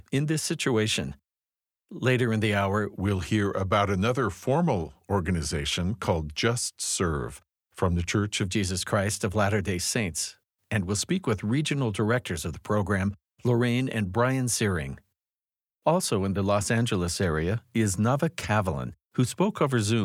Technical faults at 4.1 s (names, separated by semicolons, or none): wrong sample rate